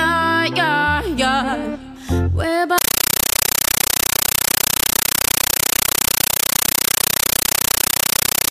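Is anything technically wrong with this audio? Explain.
Yes. From 2.78 s to the end, the sound is replaced by a compressed stream played as audio. An AC-3 (Dolby Digital) bitstream on the digital link is being treated as ordinary PCM samples instead of being decoded. Each coded frame comes out as a burst of noise about 9.3 ms long followed by silent zero padding, repeating 31.25 times a second, which fits a 448 kbps AC-3 stream. The result is very loud, rapidly chattering static in place of the sound.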